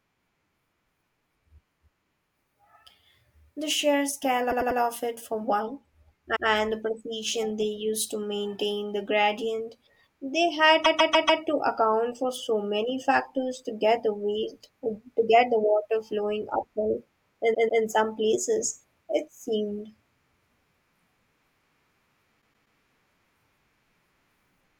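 Repeated frames occur at 4.50, 6.35 (after "of it for one"), 10.84, 17.53 (after "the water flowing uphill") and 22.41 s. A block of compressed frames, 96 to 144 ms long, was written more than once. The speech stutters one to four extra times, and the audio grows longer by that much.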